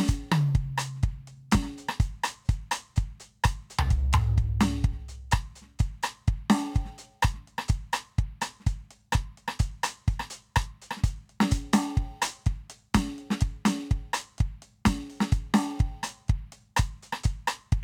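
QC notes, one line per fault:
No faults heard in this music.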